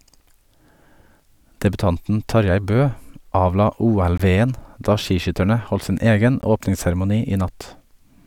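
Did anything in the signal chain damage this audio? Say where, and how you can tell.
Yes. The damage sits at the driver or buffer stage: a block of digital silence appears twice in the speech, from 4.18 to 4.20 s (20 ms) and at 6.42 s (15 ms). Each is a short hole that cuts out and back with no fade, because the output buffer was not filled in time and zeros went out instead. A network loss would normally be concealed or faded. These drops fall to silence and return with no smoothing or repeated sound.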